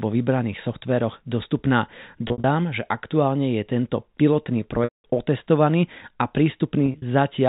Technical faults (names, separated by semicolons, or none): packet loss with pitch repetition